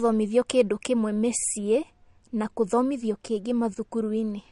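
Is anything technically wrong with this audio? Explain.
Yes. MP3 compression damage runs through the whole speech clip and is plainly audible. Nothing sounds above 11.2 kHz, a hard treble ceiling that fits a starved bitrate around 48 kbps, likely from MP3 encoding. With too few bits, the encoder drops the top band outright and discards quieter frequency lines frame by frame, so detail flickers in and out. The result is a dull, watery texture, with s sounds turning swirly and metallic and consonant onsets blurred.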